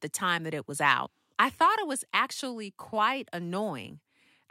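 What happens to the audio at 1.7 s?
Nothing goes wrong at 1.7 s; the speech carries on intact through that moment.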